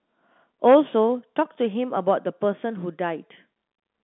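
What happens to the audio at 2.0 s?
Nothing goes wrong at 2.0 s: the sound passes through intact, carried by ordinary G.711 telephone coding with its narrow band topping out a little below 4 kHz.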